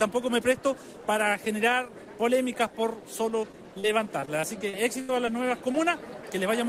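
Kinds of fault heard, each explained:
short concealed packet loss: Brief stretches of audio arrived too late and were patched by extending the preceding sound, heard as small smears or wobbles at 3.42, 3.52 to 3.54, 3.80 to 3.89 and 5.72 to 5.75 s. The spectrogram shows short smoothed or smeared patches with the fine detail missing.
repeated packet loss (robotic sound): From 4.20 to 5.28 s, seven gaps follow closely, the longest 76 ms, so about a fifth of the span is patched audio. It sounds choppy, with pieces missing. The waveform shows repeated copied segments, and the spectrogram shows striped, frozen harmonics.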